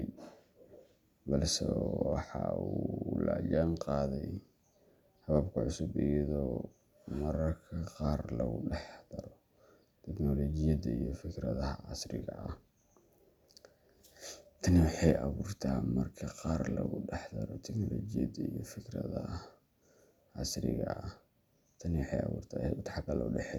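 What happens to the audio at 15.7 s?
At 15.7 s the speech carries on intact, with no dropout, click, distortion or other fault.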